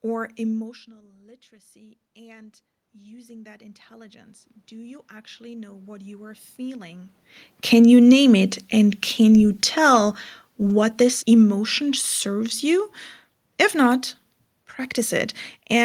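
Speech with audible automatic gain rising and then falling. Just after "or emotional", the level at the microphone drops by about 22 dB as the talker moves back, and from 1.5 s to 7.23 s the automatic gain control slowly raises its gain by about 17 dB to compensate. A talker's movement changes only the voice. Here the room noise swells steadily with the voice over nearly six seconds, which shows the gain stage is doing it. Around 7.0 s the talker moves again, and the control responds with automatic gain falling, lowering its gain by about 3 dB between 7.58 s and 8.09 s. A second fall of about 3 dB follows from 10.59 s to 12.93 s, just after "can you tell". In both falls the background sinks together with the voice, which separates them from a talker simply leaning away from the microphone.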